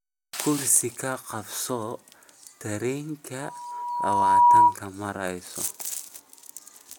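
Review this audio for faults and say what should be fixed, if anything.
A loudspeaker feedback squeal runs from 3.41 to 4.76 s. The microphone hears its own loudspeaker, loop gain exceeds one at 966 Hz, and the tone swells over about a second to roughly 15 dB above the speech, unlike a steady hum. Lower the monitor gain or notch 966 Hz.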